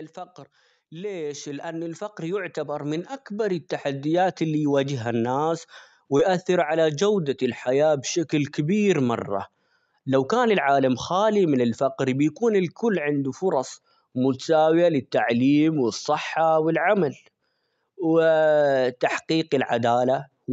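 Speech, carried over a WebRTC-style call path with Opus coding, with nothing audible above about 8 kHz. From 0.89 to 5.73 s an automatic gain rising fault lifts the level by about 15 dB. Because the background swells along with the voice, it is the gain control reacting to a quiet input rather than the speaker getting louder. A performer's crescendo would leave the noise floor where it was. The climb is slow and steady across nearly five seconds, not a sudden step. At 6.17 to 6.21 s, just before "على جودة الحياة بشكل", a short concealed packet loss leaves a gap of a few hundredths of a second. The receiver bridges it by extending the preceding sound and then blending back in, so it comes across as a brief smear or wobble rather than the hard silence or sharp click of a plain dropout or a digital glitch.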